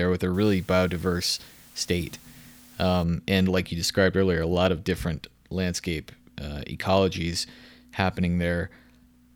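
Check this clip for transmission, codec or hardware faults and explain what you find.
One fault is present: low bit depth with dither, from 0.34 to 3.04 s, starting after "with a" and ending just before "and like you described". The speech is being stored with very few amplitude steps, which fits roughly 8-bit resolution, and dither is added before rounding so the error turns into broadband white noise rather than distortion. The result is a steady, even hiss sitting roughly 30 dB below the speech, with no grittiness or crackle.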